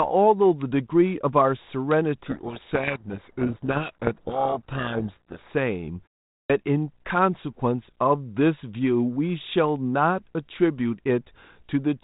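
From 2.26 to 5.49 s, a codec payload misread scrambles the G.726 code words, read in the wrong bit order, burying the speech under harsh distortion; the spectrogram shows dense broadband noise smearing the harmonics below 4 kHz. At 6.41 s, a clipped start after a pause swallows about 87 ms after a 0.42 s silence, so the waveform jumps abruptly from a flat line without its onset.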